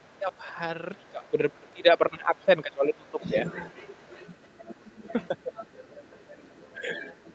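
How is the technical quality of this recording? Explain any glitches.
Not great: the talker's speech has a second voice leaking underneath it, and the main voice gets pushed down in places.

Other side's voice leaking through: there are faint scraps from 0.0 to 0.37 s, 1.06 to 1.1 s and 2.36 to 2.45 s, sitting about 35 dB under the speech. From 2.94 s to the end it becomes a steady second voice only about 15 dB down. The likely cause is the far end playing on the talker's loudspeaker and the echo canceller not scrubbing it all out of the mic signal.

Speech suppressed in double talk: from 0.94 to 3.32 s the talker's voice keeps dipping, about two seconds of it in total. At the worst point it drops by roughly 20 dB, so parts of it sound pulled back or thinned out. There's a second short dip at 5.43 to 5.53 s of about 15 dB. It likely happened because both sides were talking at once and the echo canceller couldn't tell its own talker from the echo, so it turned everything down.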